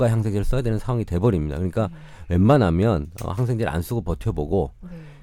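Hard clipping from 2.50 to 2.62 s: the speech peaks exceed the stage's limit by about 3 dB, are cut flat, and crackle briefly.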